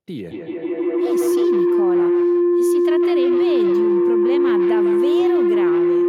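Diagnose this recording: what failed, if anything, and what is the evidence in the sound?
Feedback howl at the call stage: two devices form a gaining loop. From 0.31 s a tone near 400 Hz builds, pulsing every 150 ms or so, peaking about 12 dB above speech.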